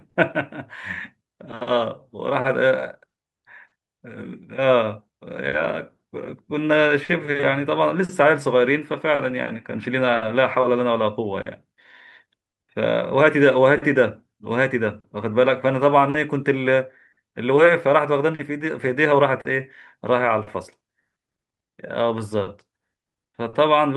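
Right from the start, and running under the whole speech clip, there is clock drift between sender and receiver. The sending side's clock runs slow by roughly four percent, so the receiver's jitter buffer keeps draining and has to pad the audio to keep playing. You hear small, unevenly spaced timing hiccups that never settle. On a waveform they show up as scattered tiny discontinuities. On a spectrogram they appear as brief vertical seams or stretched columns.

The first clear event is a short stall from a late packet at 0.09 to 0.16 s. A packet arrived about 50 ms late, the buffer ran dry, and the receiver held the last sound for 50 ms before carrying on from the same point. Nothing is lost, but the opening sound lingers too long. The waveform shows a repeated, near-identical cycle pattern there. The spectrogram shows flat, frozen harmonic lines.

From 1.23 to 6.61 s come repeated timing corrections. 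To keep pace with the slow sender, the receiver repeatedly duplicates short pieces, playing this stretch at about 98% speed and adding roughly a tenth of a second overall. Each edit is small, so the effect is a slightly dragging, uneven tempo with faint stutters. On a waveform, brief segments recur back to back. A spectrogram shows the stretch subtly elongated, with occasional doubled slices.

Overlapping that and continuing from 2.40 to 23.55 s are scattered short gaps. Around twenty late packets were each patched by extending the preceding sound, about 0.7 s of fill in total with none of the longest over roughly 50 ms. That is about four percent of the span, and nothing is actually missing. The result is isolated ticks, smears and little hiccups dotted through otherwise continuous audio. Each appears as a short smeared block or held harmonic on the spectrogram and a small repeated chunk in the waveform.

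The call path's codec is not a fault. Its band limit shows on a spectrogram as energy stopping sharply near 12 kHz, which fits Opus at about 40 kbps.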